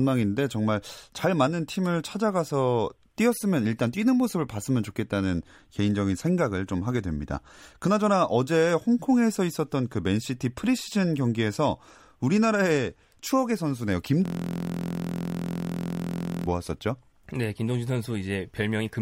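Speech, interrupted from 14.26 s to 16.46 s by a system hang loop: the host or driver stalled while the audio hardware kept replaying its ring buffer, so one 23.2 ms slice repeats about 95 times, producing a steady 43 Hz buzz that fits a 1024-sample buffer.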